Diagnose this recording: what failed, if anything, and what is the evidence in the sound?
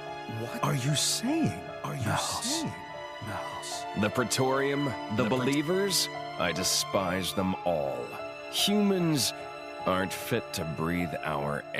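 Doubled audio track from the start until 5.54 s, where the copy cuts off abruptly. A full-band duplicate trails by about a second, about 5 dB quieter, with no decay or room colour. The likely cause is a slower second capture path mixed in at the driver or buffer stage.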